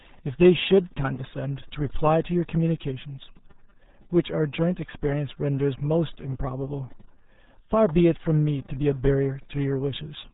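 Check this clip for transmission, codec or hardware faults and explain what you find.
One codec fault runs through the whole clip. Throughout, the RealAudio 14.4 codec squeezes the speech into a very low bitrate, with heavy coding damage: nothing above 3.8 kHz survives, leaving the voice muffled and gargly in a way that fits an 8 kbit/s stream.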